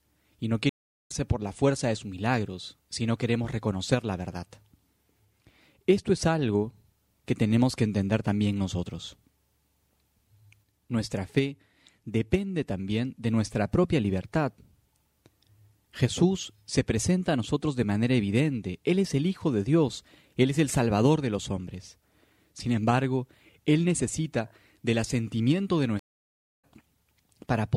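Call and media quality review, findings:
Stream reconnect at 0.69–1.12 s and 25.99–26.63 s: connection dropped and player restarted the decoder mid-stream. Gaps of about 0.41 s and 0.64 s of silence, then audio resumes ahead, skipping roughly 0.4 s and 0.7 s of material respectively.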